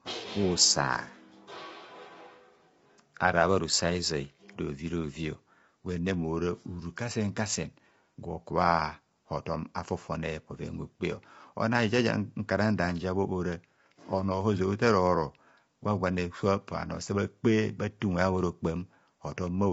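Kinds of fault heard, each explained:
Low-delay AAC compression: The speech carries plainly audible coding damage throughout, with a lowered or synthetic top band. The likely cause is AAC-ELD, the low-delay AAC used for video calls, at a bitrate around 24 kbps. Its short frames separate pitch harmonics poorly and use up bits quickly, so this little data leaves the codec short of detail in the upper band.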